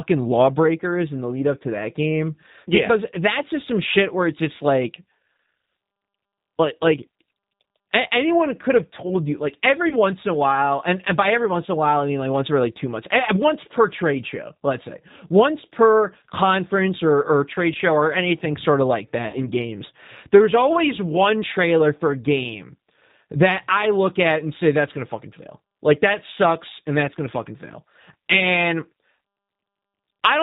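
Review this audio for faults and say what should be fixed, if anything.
Throughout the clip the speech sounds slightly rough and synthetic, with a narrow, boxy quality and nothing audible above 4 kHz. That is G.729 codec damage, and it is plainly audible. The codec rebuilds each 10 ms frame from a vocal tract filter, a pitch predictor and a few pulses, which points to an 8 kbit/s G.729A stream. Carrying the call on a wider-band, higher-bitrate codec would avoid it.

At 9.89 to 9.95 s, between "told you like every" and "in a while and", the speech smears briefly into a buzzy tone or coloured noise that fades. A longer version occurs at 19.28 to 19.48 s, between "anything sort of like" and "games there's always one". Both are VoIP packet loss concealed by the speech codec. The decoder stretched its last pitch and filter over the gap and lowered the gain frame by frame. The gaps fit about 20 ms and 50 ms of lost audio. 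Because each frame builds on the previous one, the speech stays weak or distorted after the packets return. Better network prioritisation, or forward error correction with a larger jitter buffer, would prevent these dropouts.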